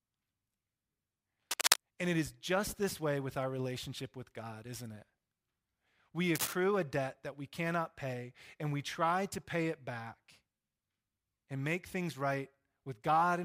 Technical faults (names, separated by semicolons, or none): cable scratch noise